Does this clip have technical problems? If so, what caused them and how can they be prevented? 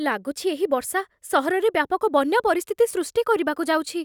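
No, nothing stood out as a technical problem on listening to this speech recording, so there is nothing here that calls for prevention.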